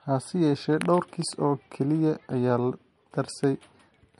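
Throughout the speech, the top end stops dead at about 11.2 kHz, leaving it dull and swirly. This is low-bitrate audio saved at a high bitrate: a likely 48 kbit/s-class MP3 re-encoded near 197 kbit/s, which kept the first pass's cut-off and artefacts intact.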